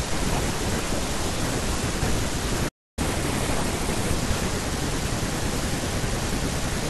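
A playback stall at 2.68 s cuts the speech off mid-flow, leaving about 0.29 s of silence until 2.99 s. The likely cause is the player running short of data or its thread being blocked, so output simply stopped until it recovered.

Catch-up at higher speed follows from 2.99 to 4.14 s: the player resamples its backlog at 1.25 times normal speed to recover the lost time, so the speech sounds hurried and raised by about four semitones before dropping back to normal.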